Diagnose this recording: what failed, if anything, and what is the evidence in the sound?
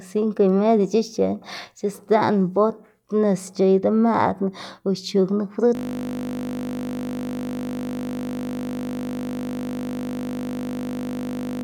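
System hang loop from 5.75 s to the end of the clip, at the driver or buffer stage. The speech stops and one 20 ms fragment repeats close to 300 times, a steady 50 Hz buzz. The host froze while the hardware kept replaying a ring buffer that likely held 20 ms.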